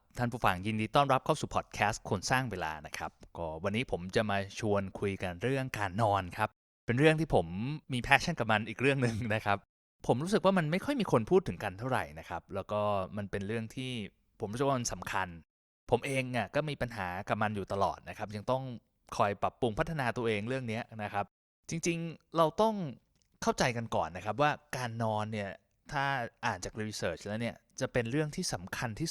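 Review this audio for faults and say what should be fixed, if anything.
Nothing in this speech recording needs to be fixed. No fault can be heard at any point, so there is nothing to correct or prevent.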